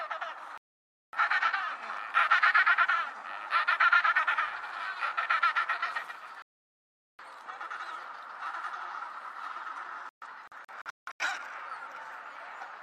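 Digital broadcast dropouts occur at 0.58–1.17 s and 6.42–7.23 s. The receiver mutes when valid frames stop arriving, so the sound cuts to silence and resumes later, with the material in between lost. From 10.09 to 11.25 s the muting breaks into several short holes, the longest about 0.17 s.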